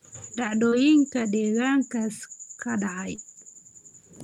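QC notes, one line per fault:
0.69–0.74 s and 3.16–3.19 s, short concealed packet loss: twice, about 20 ms of the call didn't reach the decoder in time, which fits one lost 20 ms packet each time. The receiver covered the gap by extending what it had just played, carrying on the pitch where the sound was voiced and using shaped noise where it wasn't, for roughly 20 ms, then crossfaded back to the real signal. That patch-and-blend is why each spot comes across as a quick smear or wobble.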